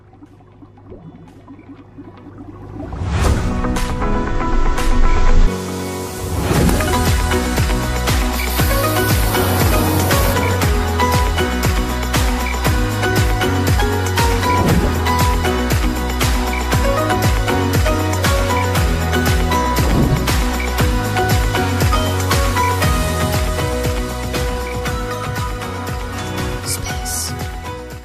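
No technical faults can be heard anywhere here.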